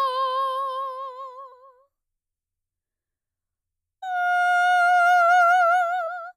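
Music with compressed frames skipped at three points: the decoder either never received whole frames of the coded stream or rejected them as damaged, so playback jumps forward. At 1.51 s roughly 100 ms of audio vanishes, and at 4.02 s and 6.06 s roughly 150 ms each, consistent with runs of about five and seven frames of around 23 ms.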